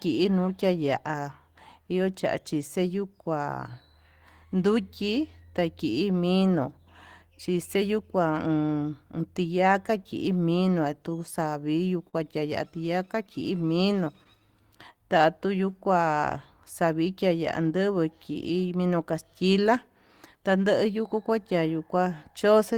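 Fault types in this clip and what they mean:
repeated stalls (stutter): From 11.31 to 12.15 s the incoming audio fell behind playback four times, so the buffer kept running dry and the receiver had to stretch out whatever it had just played. Those fills add up to 64 ms, the longest about 41 ms, and nothing is actually lost. What you hear is the speech catching and dragging in small hitches, like it's tripping over itself for under a second.
scattered short gaps: Between 12.87 and 14.27 s there are around seven tiny holes sprinkled through the speech, each patched by carrying the previous sound forward for a moment. They're short, the longest roughly 15 ms, together about 50 ms, so the speech stays clear, but you catch little ticks and smeared hiccups dotted along that stretch rather than one obvious dropout.
jitter buffer slow-down: From 13.42 to 16.11 s the receiver was padding its reserve by repeating single pitch cycles and slivers of pause over and over. 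That adds 126 ms, so the talking runs at about 96% speed while the pitch stays put. It overlaps the tail of the short gaps, and the speech comes across a bit drawn out, with vowels lingering slightly longer than they should.
jitter buffer speed-up: Later, from 18.06 to 20.57 s, the buffer was holding more than it wanted, so the receiver trimmed out short pieces of a pitch cycle or a few, again and again, to bring the delay down. Roughly 150 ms gets shaved off, putting the speech at about 106% speed at the same pitch, which gives that passage a slightly hurried, clipped feel compared with the rest.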